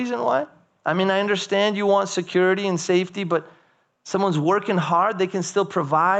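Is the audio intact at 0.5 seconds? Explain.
No. Gain pumping runs through the whole clip, so it is present at 0.5 s. The level swings by around 10 dB. This is likely the input gain set far too high, with a fast limiter or compressor clamping down on each loud sound and then releasing. That squashes the dynamics.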